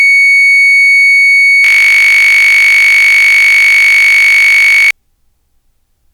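At 1.64 s the music suddenly locks into a system hang loop and stays stuck until 4.91 s. The machine or its audio driver froze, but the sound hardware kept replaying the same small stretch of its ring buffer. That stretch is only 20 ms long and repeats some 160 times, so you don't hear a stutter. Instead there's a steady buzz pitched at 50 Hz, which fits a buffer of about 20 ms.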